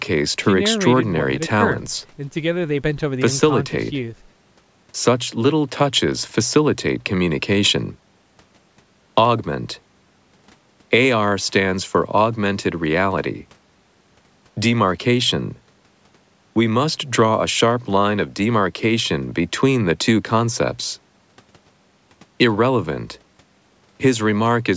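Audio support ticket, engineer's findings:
Gain stage overdriven on two speech peaks, converter or fixed-point stage hitting full scale by about 2 dB. Hard clipping at 9.18–9.22 s and 22.41–22.44 s. Peaks shaved flat, adding upper harmonics; brief crackle on the peaks, no sustained fuzz. Call microphone path working normally, nothing above 8 kHz. Probable fix: reduce input gain or add limiter ahead of the clipping stage.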